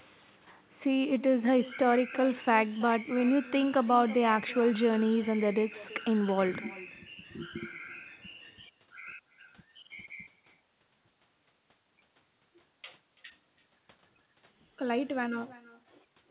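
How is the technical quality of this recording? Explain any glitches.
The recording has one clear fault: an echo with no canceller, running through the whole clip, on top of narrowband call audio with nothing above 4 kHz, consistent with a G.711-style telephone codec.

Echo with no canceller: Throughout, the speech is trailed roughly 300 ms later by a quieter copy, about 19 dB down. The far end's loudspeaker output is picked up by its microphone and returned uncancelled, so each phrase gains a thin shadow.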